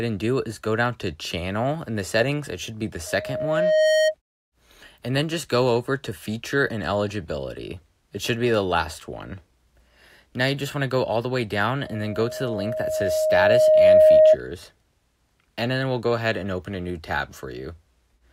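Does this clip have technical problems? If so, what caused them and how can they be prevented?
Yes. A loudspeaker feedback squeal at 624 Hz, from 3.06 to 4.15 s and 11.80 to 14.37 s, is a speaker-to-microphone loop with gain above one. Unlike a steady hum, it swells to about 10 dB, then 15 dB, above the sound. Lowering speaker gain or separating microphone and speaker prevents it.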